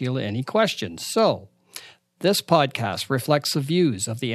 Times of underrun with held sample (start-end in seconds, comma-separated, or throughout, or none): 2.68